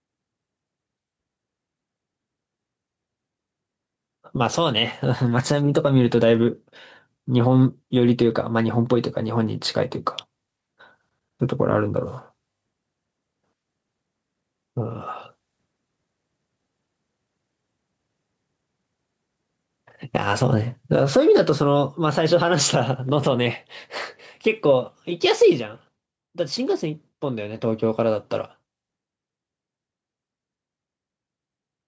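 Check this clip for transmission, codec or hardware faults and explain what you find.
One fault runs through the whole of this speech clip: gain pumping. The likely cause is input gain set far too high, with a fast limiter pulling it down on every loud syllable. The gain swings by about 10 dB, so loud and quiet passages sit close in level and the sound is squashed. The band stops at 8 kHz, which comes from the call's microphone processing and is not a fault.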